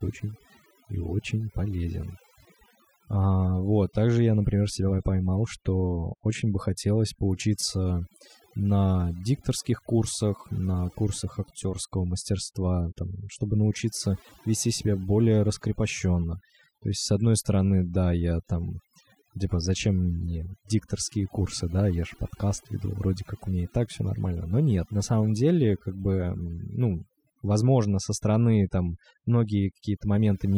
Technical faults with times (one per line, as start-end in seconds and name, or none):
0.00-30.58 overdone noise removal